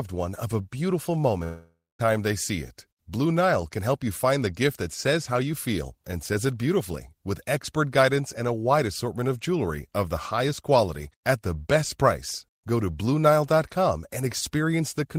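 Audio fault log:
1.43–2.01 s, long network dropout: the speech stops and the last sound smears into a fading buzz, then about 0.24 s of silence before it resumes at "they see it". About 0.56 s of audio likely never arrived and is simply gone.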